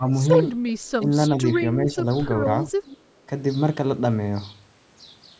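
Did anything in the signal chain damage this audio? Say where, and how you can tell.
Yes. The call processing stage shows speech suppressed in double talk at 0.0–0.12 s, 1.81–2.06 s and 2.85–2.93 s. The level ducks by roughly 15 dB at the start and by a small amount later, likely because the echo canceller misread both parties talking. Unlike packet loss, these come from the canceller turning the voice down rather than from lost data.

An echo leak appears at 2.86–2.98 s. A faint, discrete copy of the speech arrives 389 ms late at about 20 dB below the speech, likely residual loudspeaker echo the far end's canceller failed to remove. Room reverberation would trail continuously, but this is a separate delayed repeat. The expected bass roll-off and the 8 kHz ceiling come from normal call microphone processing.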